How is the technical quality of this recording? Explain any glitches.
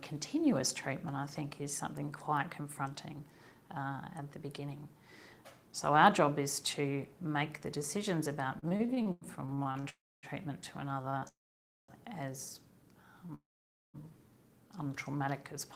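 The second half has clear network timing faults. Nothing is lost, but the audio drags, stutters and stops three times.

Repeated stalls (stutter) occur from 8.59 to 9.86 s and from 10.95 to 11.25 s. Packets arrived late, and the jitter buffer kept running dry. The receiver held the last sound through each gap. The first run has 12 gaps of up to 97 ms. The second has 4 gaps of up to 30 ms. Both sound choppy and halting.

Call audio freezes occur at 9.89 to 10.26 s, 11.28 to 11.91 s and 13.35 to 13.97 s. The sound holds, then drops to silence for about 0.26, 0.55 and 0.53 s. It then resumes where it stopped. The likely cause is packets held up long enough to empty the buffer.

A short stall from a late packet occurs at 13.26 to 13.32 s. One packet missed its slot, and the last sound was stretched by 23 ms. It makes a brief hitch just before the final freeze.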